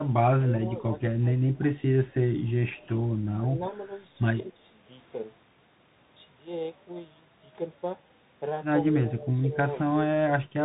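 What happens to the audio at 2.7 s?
A faint, delayed copy of the speech trails the live sound from 2.46 to 2.88 s, arriving about 0.2 s behind it and sitting very low, far beneath the direct signal. It is an echo leak, most likely from a far end playing the call on a loudspeaker whose echo canceller let part of what its microphone picked up slip back into the return path, so a scrap of the outgoing sound is heard again.

Over that same moment, as everywhere in the clip, the sound is dull and narrow, with nothing above 3.8 kHz, a scratchy edge on sibilants and a grainy hiss beneath the speech. That is the Bluetooth CVSD headset codec. It encodes each sample as a single up-or-down step whose size adapts, a scheme that fits a 64 kbps link. Loud bright sounds outrun the step and distort, and the constant stepping leaves the granular noise.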